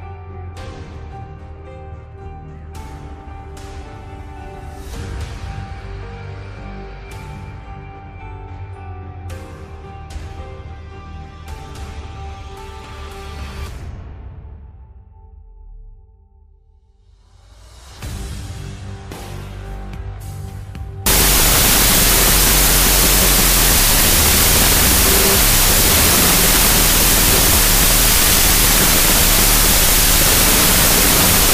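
From 21.06 s to the end, the audio shows a wrong sample width. The pattern fits 32-bit float data being read as 16-bit integers, so each stored value is split into two 16-bit numbers. The result is loud, harsh broadband noise with the original sound buried inside it, playing at half speed and an octave low. On a waveform the section jumps sharply in level. A spectrogram shows dense noise filling every frequency.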